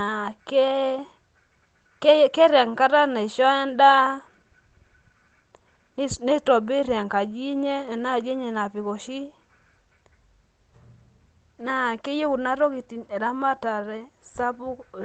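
Nothing stood out on listening to this speech clip, which comes across as an ordinary call recording.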